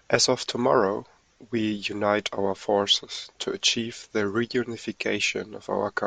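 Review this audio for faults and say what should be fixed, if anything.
Nothing needs to be fixed, as reviewing this audio turns up no faults.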